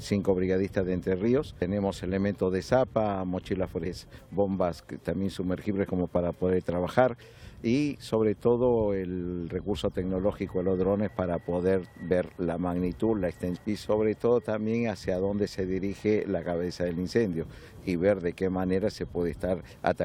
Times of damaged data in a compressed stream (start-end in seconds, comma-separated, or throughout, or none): 1.61, 3.85, 13.55